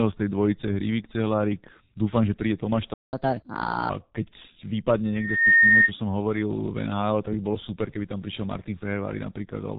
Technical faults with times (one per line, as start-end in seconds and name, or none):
0.00-9.78 G.723.1 codec
2.94-3.13 playback stall
3.13-3.89 catch-up at higher speed
5.12-5.92 loudspeaker feedback squeal